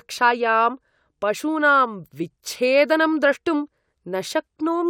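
No technical faults occur at any point in the recording.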